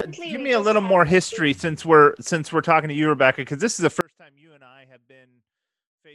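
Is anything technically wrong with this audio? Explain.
Yes. At 4.01 s the speech suffers an audio dropout to a faint residue that lasts to the end of the clip. The likely cause is the wanted signal being lost upstream while the path after the break stayed live, so the recording carried on without its source. The speech cuts off abruptly in mid-flow rather than pausing or fading, and the remaining seconds hold only a faint trace of sound, roughly 35 dB below the normal level.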